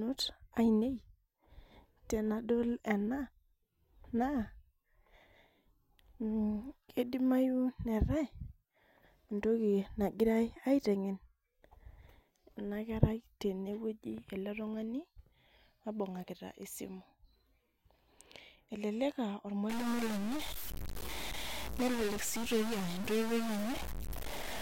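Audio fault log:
19.70–24.61 s, stuck bit: harsh, buzzy distortion sits on the speech to the end, and the pauses fill with a steady hiss at roughly -35 dBFS. A data bit is likely held fixed, so about half the samples are offset by its weight, and near-silent values flip it with their sign.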